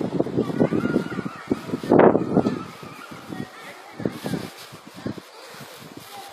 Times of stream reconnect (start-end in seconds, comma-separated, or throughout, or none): none